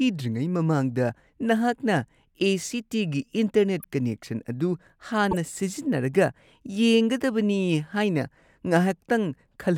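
Corrupt frame decoded, twice: at 3.80 to 3.85 s and again at 5.31 to 5.37 s, the speech is interrupted by a brief chirp, squeak, blip or burst of noise. Bits inside the compressed stream were flipped, yet the decoder played those frames anyway, reading wrong gains and codes and spraying energy into frequencies where it does not belong. Each burst spans a few damaged frames. The second one is distinctly louder, peaking around -10 dBFS against roughly -25 dBFS for the first.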